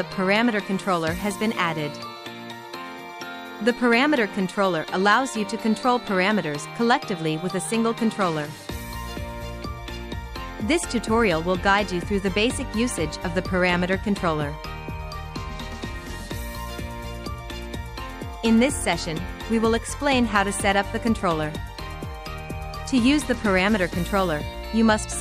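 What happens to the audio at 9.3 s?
Nothing goes wrong at 9.3 s: the audio plays through that moment intact, with no dropout, click, glitch or other fault.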